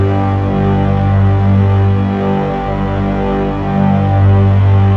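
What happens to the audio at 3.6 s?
Nothing goes wrong at 3.6 s; the audio plays through that moment without any dropout, click, glitch or other audible fault.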